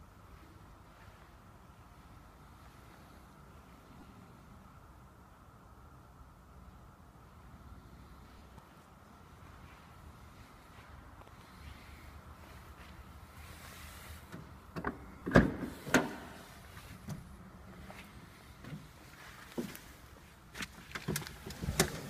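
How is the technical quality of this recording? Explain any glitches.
The recording has two kinds of short glitch, both brief and sparse, under a light layer of lossy compression.

Lost LE Audio frames occur at 4.00–4.03 s, 8.38–8.42 s and 15.19–15.22 s, lasting 22.5, 30 and 30 ms, which fits runs of 7.5 ms frames. The LC3 decoder fills each gap by repeating the last spectrum with scrambled phase, so the sound briefly smears into noise instead of cutting out.

Periodic USB or driver dropouts begin at 15.65 s and continue to about 21.61 s, recurring every 1.99 s, about four times. Each time, something blocks the audio path, and roughly 10 ms is skipped, not filled. The sound jumps forward with a click. Unlike the frame losses, these are evenly spaced and leave no noisy smear.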